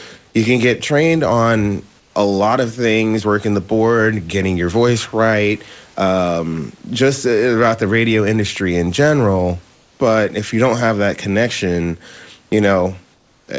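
At 2.00 s, between "can get trained on" and "a lot of things", at 9.74 s after "radio industry in general", and at 13.14 s, the room background gives way to a smooth, featureless hiss for 160, 260 and 340 ms, about 2 to 4 dB quieter. This is likely comfort noise in place of the background, with the pause filled by synthetic noise. Unlike a dropout or noise gate, the gap is never truly silent.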